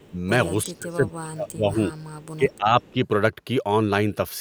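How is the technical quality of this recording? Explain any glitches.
The recording has two recurring call-processing faults. A faint echo leaks back, and the speech is pushed down at moments when both sides seem to talk at once.

Echo leak appears at 0.00 to 0.07 s, 1.95 to 2.27 s, 2.50 to 2.58 s and 2.82 to 2.91 s. A delayed copy of the speech trails about 351 ms behind the original. It sits roughly 30 to 35 dB below the main speech, so it is a faint ghost. The likely cause is a far-end loudspeaker whose echo canceller let some of its microphone pickup through and sent it back.

Speech suppressed in double talk occurs at 0.08 to 0.16 s, 0.66 to 1.79 s, 2.37 to 2.75 s and 2.92 to 2.99 s. The speech level dips by roughly 10 to 20 dB. The deepest and longest dip runs through most of the 0.66 to 1.79 s stretch. The speech thins and drops in pieces. This is likely an echo canceller that could not tell the talker from loudspeaker echo and turned both down.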